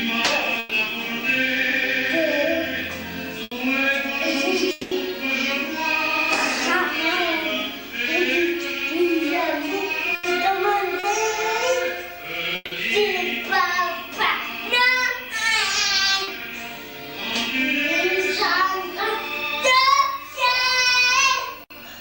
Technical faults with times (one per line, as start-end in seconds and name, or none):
0.59-0.74 burst of packet loss
3.43-3.54 burst of packet loss
4.71-4.94 long network dropout
10.15-10.26 burst of packet loss
10.99-11.06 short concealed packet loss
12.55-12.74 long network dropout
16.23-16.30 short concealed packet loss